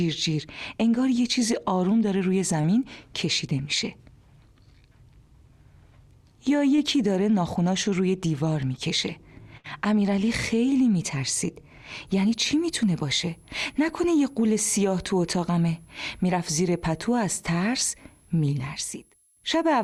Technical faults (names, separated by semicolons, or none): short concealed packet loss; burst of packet loss; switching supply whistle